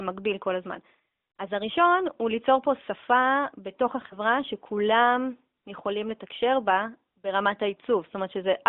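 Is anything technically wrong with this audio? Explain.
Yes. From about 4.08 to 4.18 s the speech briefly dips or warbles, then returns weak or rough for a moment. This is a lost AMR speech frame. The frame failed its check, so the decoder filled the gap by repeating the last good pitch and vocal-tract settings at reduced gain, and the sound smears for an instant. The short length of the disturbance fits a single lost 20 ms frame on this narrowband AMR call, whose 200 Hz to 3.7 kHz band is audible throughout.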